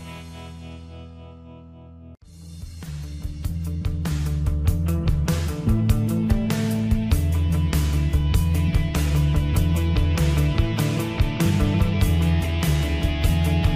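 No dropouts, clicks, distortion or other technical faults turn up anywhere in the recording.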